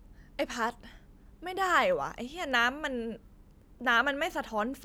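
A short speech recording with no technical faults to point to anywhere in the signal.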